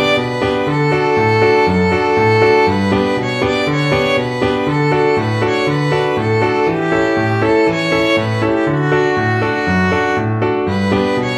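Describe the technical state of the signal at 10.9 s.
At 10.9 s the signal is intact, with no dropout, clipping, glitch or other fault audible at that moment.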